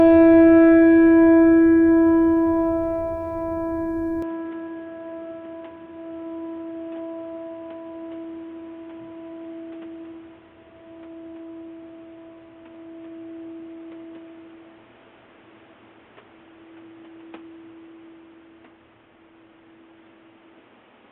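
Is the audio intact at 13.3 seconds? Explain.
No. From 4.22 s to the end, the input likely switched to a poorer device, cutting everything above 3.8 kHz, so the music sounds dull and boxy, with faint new background noise.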